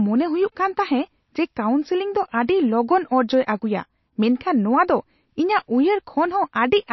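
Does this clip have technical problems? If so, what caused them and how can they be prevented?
Yes. Throughout the speech, nothing is present above 5.8 kHz, and the sound is plainly watery and smeared, likely from MP3 compression at a low bitrate, around 28 kbps. Starved of bits, the encoder cut the treble and dropped weak frequency lines between frames. Encoding at a higher bitrate prevents this.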